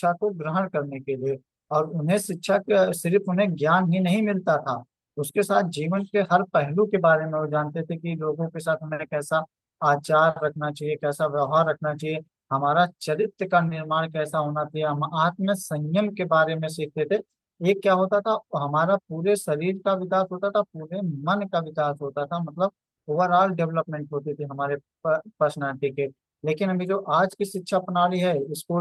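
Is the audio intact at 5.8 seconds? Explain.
Yes, at 5.8 seconds the audio is intact, with nothing in the sound to suggest a dropout, glitch or other fault at that moment.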